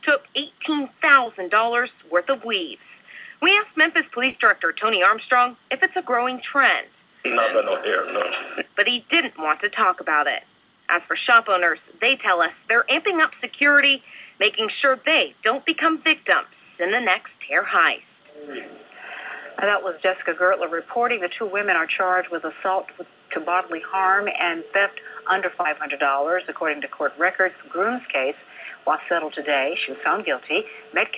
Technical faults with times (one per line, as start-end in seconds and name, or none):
1.24-1.28 short concealed packet loss
4.30-4.35 short concealed packet loss
25.61-25.67 short concealed packet loss